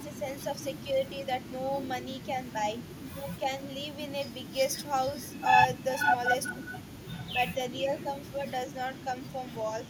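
From 0 to 1.28 s the speech dips in patches, dropping by around 10 dB, most likely speech suppressed in double talk: an echo canceller treated the talker as loudspeaker echo while the far side was speaking and attenuated both. A shallower dip of about 5 dB follows between 2.33 and 3.86 s, again likely double-talk suppression. On a waveform these show as brief sunken stretches in the envelope.

From 5.08 to 7.25 s a second copy of the speech trails the original by 440 ms, only about 5 dB quieter, so it reads as a clear double. This is likely echo leak, where loudspeaker sound reached a microphone and got past the canceller. A spectrogram shows the speech's harmonic pattern repeated 440 ms later.

From 6.55 to 9.72 s the suppression deepens to roughly 25 dB, likely double-talk suppression again. The waveform shows near-gaps, and the spectrogram shows dark vertical cuts.

From 8.95 to 9.03 s a faint echo returns at the same 440 ms delay, around 30 dB down, likely a brief echo leak. 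It appears only as a faint smear on the spectrogram.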